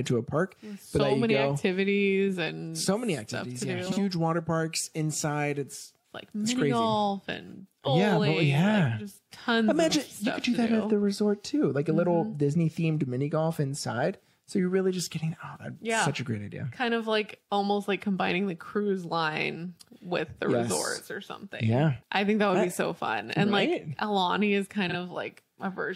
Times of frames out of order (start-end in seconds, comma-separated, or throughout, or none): 3.86-3.98, 24.89-24.95